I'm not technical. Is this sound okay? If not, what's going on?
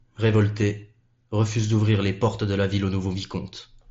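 Yes, nothing here needs fixing; it's speech coming through a Bluetooth headset, which is why the very highest, crispest sounds are trimmed off, exactly as such headsets normally sound.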